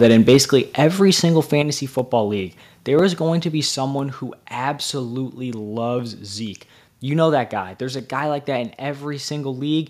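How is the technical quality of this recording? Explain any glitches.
The recording has two related faults at the start: a short stretch of microphone overload, followed by three abrupt drops in level.

From 0.02 to 0.37 s the loudest moments have a harsh, crackly edge, with peaks pushed about 3 dB past the converter's limit and a small share of samples, around 2 percent, flattened. The likely cause is an input volume set too high, so the converter cut the waveform tops off.

The microphone volume steps down at 0.37 s (about 3 dB), 1.62 s (about 6 dB) and 3.66 s (about 4 dB). Each time, voice and background fall together in a single instant. This sudden, uniform drop likely comes from the call software automatically reducing the device's input volume after finding the microphone too loud. The first step follows the distorted opening directly.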